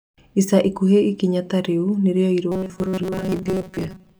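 From 2.52 s to the end, the speech turns into a robotic sound from repeated short buffers: a stiff, metallic buzz near 188 Hz that only loosely follows the words. The likely cause is audio arriving too slowly, so a fragment of about 5.3 ms is looped to fill the gaps, with around 70 percent of the time repeated. On a spectrogram this shows as flat, evenly spaced harmonics at multiples of 188 Hz, and the waveform shows identical repeating cycles.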